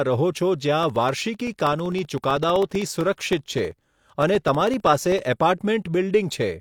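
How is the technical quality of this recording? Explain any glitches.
The recording has one clear technical fault: periodic USB or driver dropouts.

From 0.83 s to 5.19 s, the audio is interrupted every 64 ms, about 15.6 times per second, some seventy times in all. Each time, roughly a millisecond of audio is lost and replaced by silence. A background task is blocking the USB bus or the audio driver at a fixed interval, so the stream briefly stalls. The result is an evenly spaced train of ticks or pops over the speech, audible only while there is signal.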